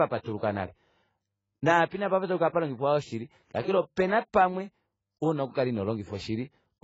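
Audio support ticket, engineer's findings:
Speech band stops hard at 7.6 kHz, whole clip. Swirly, smeared low-bitrate artefacts throughout. Likely low-bitrate audio saved at a high bitrate. The sound fits a first pass near 16 kbit/s AAC, later re-encoded as 256 kbit/s MP3. The second encode keeps the damage. Lost detail does not return.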